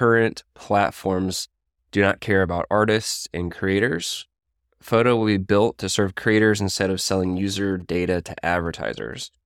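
From 7.10 to 9.23 s, just after "serve creators instead of", GSM signalling bursts intrude: a nearby 2G phone's short radio transmissions are rectified by the audio circuit into a galloping dit-dit-dit of short 217 Hz buzzes, roughly 30 dB below the speech, showing as clustered vertical striations and harmonic stripes on a spectrogram.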